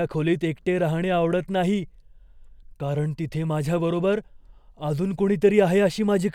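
No technical faults are audible in this speech recording.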